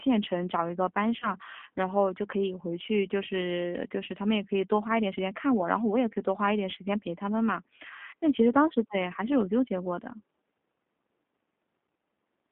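From start to finish the speech goes through a G.729 codec, and you can plainly hear it. The band sits at about 200 Hz to 3.4 kHz, consistent with an 8 kbit/s coder that rebuilds each frame from a filter, pitch and a few pulses, so it sounds rough and slightly synthetic.

At 1.2 s there's VoIP packet loss concealed by the speech codec. About 20 ms went missing, which fits a single lost packet, and the decoder patched it by repeating its last pitch and filter at falling gain. You hear a short buzzy or noisy smear, and the sound stays a bit off until about 1.30 s. The same thing happens at 8.1 s, with another 20 ms gap concealed the same way, and it clears by about 8.14 s.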